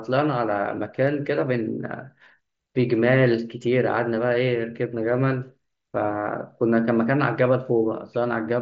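It's a speech recording that has come through a Bluetooth headset link on the mSBC wideband codec, which caps the audio at about 8 kHz and leaves just a faint graininess on the louder moments, and there's nothing technically wrong with it.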